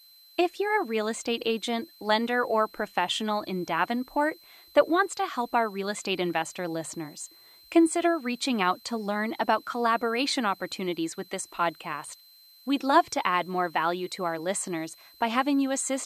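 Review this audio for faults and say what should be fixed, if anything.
A switching supply whistle runs through the whole speech clip: a thin, high tone wandering between about 4.06 and 4.13 kHz, around 30 dB below the speech. A switching power supply in the chain is cycling in an audible burst mode or beating against another supply, so its pitch slides as the load shifts. Unlike mains hum or a fixed test tone, it sits far above 50/60 Hz harmonics. Power the recording gear from a linear or well-filtered supply, or one whose switching frequency stays above the audible band.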